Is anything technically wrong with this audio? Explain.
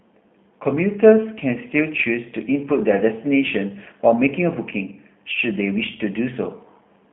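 Yes. Throughout, the speech sounds rough, slightly synthetic and boxy, with nothing above 3.4 kHz or below 150 Hz, because G.729 coding rebuilds it from a vocal tract filter and sparse pulses at a rate that fits 8 kbit/s.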